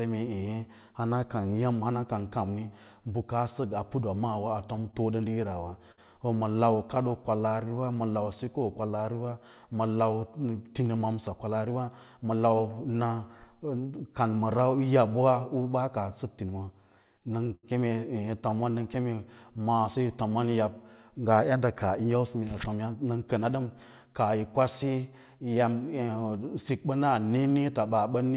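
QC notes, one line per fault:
4.76–7.71 s scattered short gaps: brief ticks, smears and hiccups from around ten small holes, the longest near 70 ms, each patched by continuing the last sound after lost or late packets.
6.76–9.03 s jitter buffer slow-down: speech drags slightly at unchanged pitch, running at 94% speed, as the receiver repeated pitch periods to add 141 ms and rebuild a low buffer.
10.95–12.70 s jitter buffer speed-up: delivery sounds hurried at the same pitch, at 109% speed, because short pitch-period pieces totalling roughly 150 ms were cut to shed excess buffered delay.
17.46–19.06 s repeated stalls (stutter): speech drags and stutters as the buffer ran empty nine times. Continuing the last sound filled 161 ms, with the longest wait 81 ms and nothing missing.
19.15–20.09 s jitter buffer slow-down: slightly drawn-out sound at the same pitch, at 92% speed, with 82 ms added through repeated pitch periods while the receiver rebuilt its reserve.
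22.00–24.43 s jitter buffer speed-up: a rushed feel without any pitch change, at 107% speed, as roughly 200 ms of short pitch-period pieces were removed to reduce buffered delay.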